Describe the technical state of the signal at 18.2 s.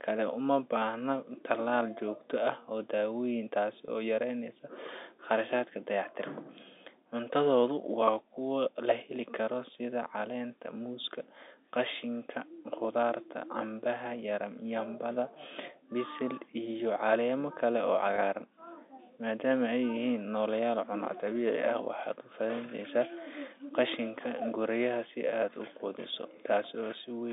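Packet loss with pitch repetition at 18.16 to 18.18 s: about 20 ms went missing, which fits a single lost packet, and the receiver repeated the last pitch period, leaving a brief held, buzzy tone.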